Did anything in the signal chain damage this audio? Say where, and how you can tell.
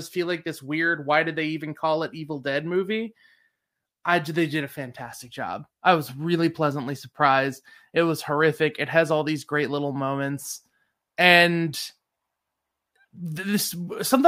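No, nothing in this speech recording shows damage from the signal chain. Listening for trouble at every stage, from the wiring and converter through to storage and playback, turns up nothing to point at.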